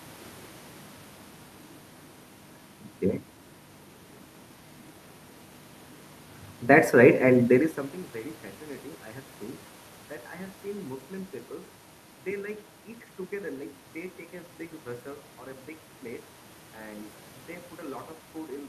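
No technical faults can be heard anywhere in the speech. Where the level is brought down or up, it moves smoothly, like a fader being eased over a second or so.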